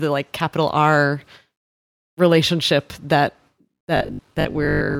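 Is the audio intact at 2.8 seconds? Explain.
Yes, at 2.8 seconds the speech plays through cleanly, with no dropout, click, distortion or other fault audible at that moment.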